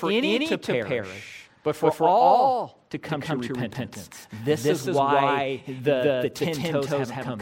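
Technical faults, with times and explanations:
Throughout: doubled audio track. Most likely a second, slower capture path or an edit left two copies of the speech out of step. A full-band copy of roughly equal level trails by about a fifth of a second, giving a dry, flat repeat with no decay or room colour.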